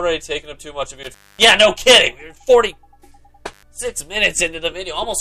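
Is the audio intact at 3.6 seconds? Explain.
No. An intermittent contact runs from 3.50 to 3.63 s: a loose plug or cable opens the signal path for about 101 ms, so the sound cuts out with crackle at each edge. That crackle at the edges is what sets it apart from a digital dropout, whose gap starts and ends cleanly.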